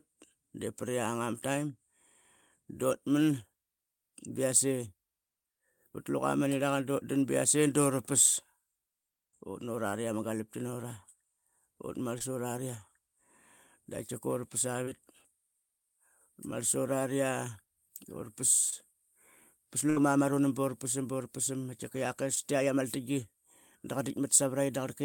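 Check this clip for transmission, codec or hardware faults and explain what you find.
The speech has two kinds of transmission fault, both from packets that arrived too late or not at all.

Short concealed packet loss occurs four times: 12.18–12.21 s, 14.85–14.88 s, 18.70–18.73 s and 22.35–22.37 s. Each time the receiver bridged the gap by extending the last sound for about 11 to 23 ms, then blended back into real audio, with 10 to 20 ms of the original missing. Each is heard as a brief smear or wobble rather than a gap.

A burst of packet loss runs from 19.90 to 19.97 s. Here the receiver had to stretch its estimate over about 65 ms, fading it as it went, and about 60 ms of speech is gone. Unlike the short dropouts, this one is long enough to hear as a held, decaying buzz or hiss before the speech picks up further along, with a piece skipped.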